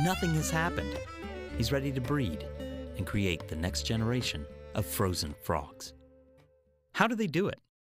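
No technical faults are audible.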